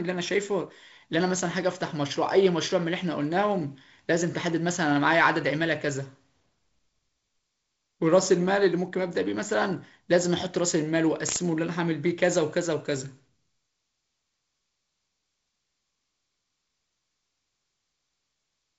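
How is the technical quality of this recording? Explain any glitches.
No glitches can be heard in this speech recording. It has the sound of G.722 wideband telephone coding, with nothing above about 7.7 kHz, a light hiss in the upper band and a slightly noisier lower band, which fits the 48 kbit/s mode.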